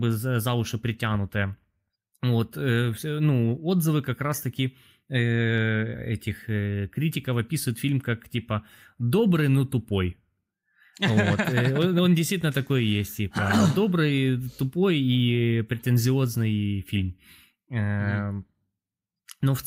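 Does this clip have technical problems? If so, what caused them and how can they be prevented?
No, nothing in this recording reads as a technical fault, so there is no cause to trace and nothing to prevent.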